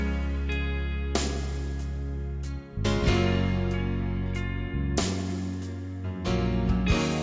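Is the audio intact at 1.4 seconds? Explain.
Yes, at 1.4 s the audio runs cleanly, with no dropout, click, distortion or other break in the signal at that point.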